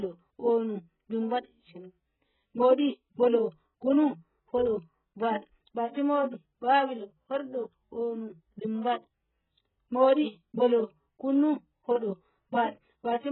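From the start, the speech is dull and muffled. Nothing is heard above about 4.1 kHz. Sibilants lose their edge and turn fizzy. Sustained sounds warble and smear. The damage is heavy and lasts the whole clip. It is likely AAC compression, in the AAC-LC form, at a very low bitrate. The sound fits something near 8 kbps. At that rate the encoder drops the upper bands entirely. It quantises what remains so coarsely that gaps and noisy fill appear across the spectrum.

At 10.14 s comes a pre-echo. A short hiss runs for about 34 ms, until 10.18 s, just before a sharp attack. The codec spreads its quantisation noise across a whole block. The attack sits late in that block. So noise sized for the loud onset leaks into the quiet moment ahead of it. The attack itself sounds softened and smeared.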